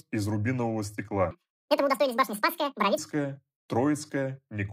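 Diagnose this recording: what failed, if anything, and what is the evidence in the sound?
From 1.31 to 2.98 s, just after "из рубинового", the speech jumps to double speed and an octave higher: audio read two samples at a time. The sample-format stage pairs samples as single frames. A spectrogram shows formants stretched upward.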